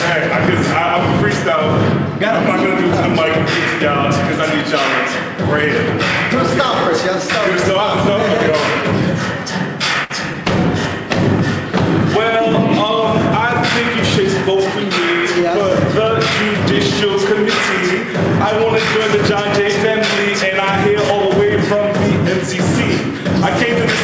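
A burst of packet loss occurs at 10.04 to 10.12 s. Several packets in a row failed to arrive in time, so the receiver extended the last sound for 57 ms while fading it down. Playback then resumes with about 60 ms of audio skipped.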